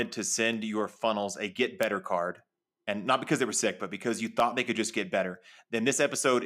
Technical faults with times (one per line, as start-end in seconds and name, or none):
0.53 dropped samples
4.40 dropped samples